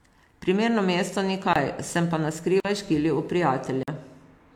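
Blocks of digital silence occur at 1.53 to 1.56 s, 2.60 to 2.65 s and 3.83 to 3.88 s. The first lasts about 23 ms, and the other two about 46 ms each. In each case the speech drops abruptly to nothing and returns just as suddenly, with no fade. These are short holes rather than pauses. The lengths fit a 1024-sample buffer and then two such buffers that the output was not given audio in time to fill.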